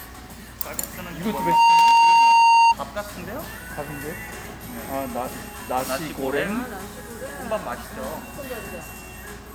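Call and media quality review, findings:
Loudspeaker feedback squeal, 1.23 to 2.75 s. Single tone at 922 Hz swells within half a second. Peaks about 15 dB above surrounding sound. Mic picking up its own loudspeaker. Loop gain over unity at that frequency. Sustains until loop breaks.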